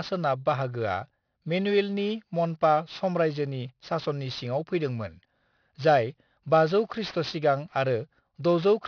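Aliasing runs through the whole speech clip: it sounds resampled down to around 11 kHz unfiltered, so content above 5.5 kHz folds back, leaving sibilants gritty and metallic.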